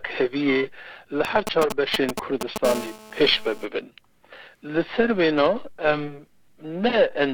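Right from the start there's periodic clock jitter: the converter clock is wobbling at around 1 kHz, smearing sidebands onto everything and giving the sound a rough, metallic edge. From 1.25 to 2.66 s a nearby 2G phone is signalling, and its rectified GSM signalling bursts come through as a galloping dit-dit pattern of short 217 Hz buzzes, roughly as loud as the sound itself. Then from 2.66 to 3.65 s the phone is in a call, and the GSM phone buzz becomes a steady, raspy 217 Hz drone full of harmonics, sitting about 12 dB under the signal.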